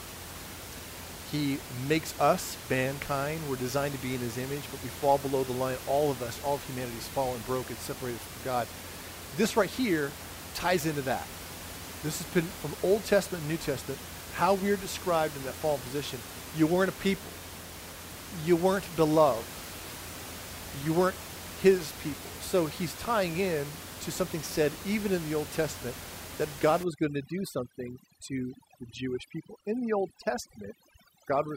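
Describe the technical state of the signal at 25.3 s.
At 25.3 s the speech signal is intact, with only the room's own background noise audible, sitting about 13 dB below the voice.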